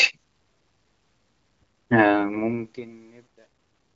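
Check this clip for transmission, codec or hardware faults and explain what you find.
One fault stands out: truncation distortion on the fade-out, from 1.6 s to the end. The fade stage drops low-order bits without dither, consistent with about 12-bit resolution, so the decaying speech collapses into coarse steps and turns gritty, worst from 2.69 s, beneath the light AMR-WB coding.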